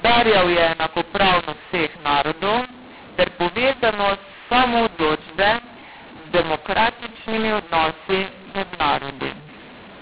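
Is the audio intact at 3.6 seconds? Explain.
No. Throughout the clip, including at 3.6 s, the mu-law and A-law mix-up applies: the speech was coded with A-law but decoded as mu-law, so sample levels are scrambled. The result is harsh, distorted speech, with quiet stretches lifted into audible noise.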